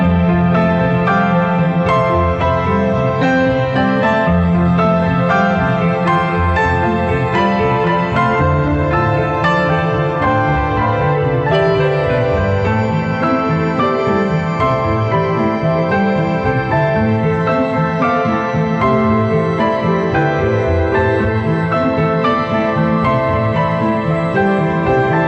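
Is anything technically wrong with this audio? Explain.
No, nothing here sounds technically wrong: the audio has come through a call path whose codec tops out around 8 kHz, and that's just how a call like this normally sounds.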